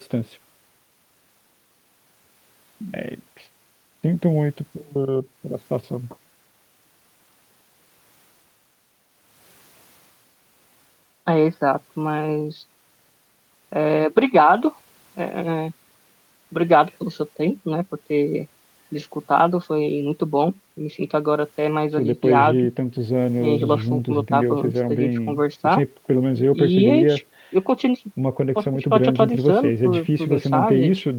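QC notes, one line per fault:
No faults heard in this recording.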